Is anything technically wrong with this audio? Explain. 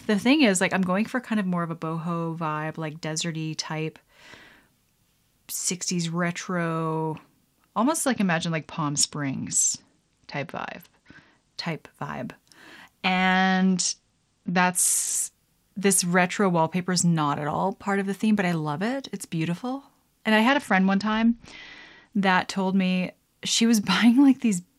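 Yes. Bluetooth SBC bit pool drops occur at 8.06–11.58 s (after "retro almost"), 13.34–15.16 s and 20.49–22.13 s. The encoder cut its bit pool, which fits a fall from 28 to 9. The upper sub-bands lose their bits, and the rest are coarsely quantised. The treble dulls and gritty noise rises until recovery.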